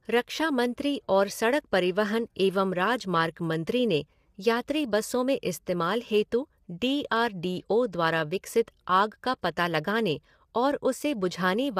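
Low-delay AAC compression runs throughout the speech, plainly audible as a rough, grainy voice. Its likely cause is AAC-ELD's short frames resolving harmonics poorly, at a rate that fits about 32 kbps.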